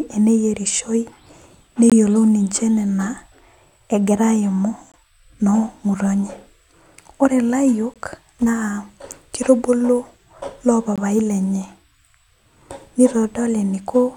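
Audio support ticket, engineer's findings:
Gap between chunks at 1.90, 4.92, 7.94 and 10.96 s: 20 ms silent holes in the speech, every 3 s. Stream split into 3-second chunks; silence inserted at each join, probably codec padding or late chunk start in player. No audio lost, only interrupted.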